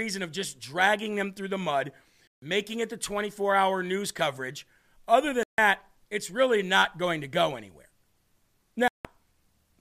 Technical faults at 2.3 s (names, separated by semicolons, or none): Bluetooth dropout